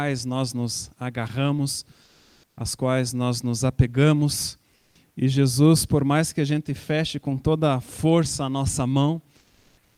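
Likely discontinuous transmission, with the sender going silent in pauses so the receiver substitutes comfort noise in place of the background: at 2.03–2.57 s, 4.75–4.95 s and 9.37–9.97 s the real background becomes a steady, featureless hiss, about 2 dB louder, then about 4 dB and 3 dB quieter.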